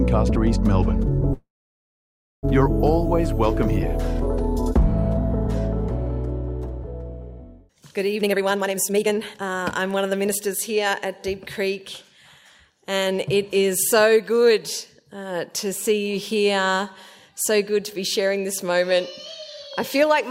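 A call audio freeze runs from 1.33 to 2.45 s: the sound stops and stays silent for most of that 1.1 s gap, likely because delayed packets emptied the jitter buffer, then resumes without losing anything. A jitter buffer speed-up follows from 8.19 to 11.06 s, where repeated removal of short pitch-period pieces, around a second in all, makes the audio run at about 138% speed with unchanged pitch.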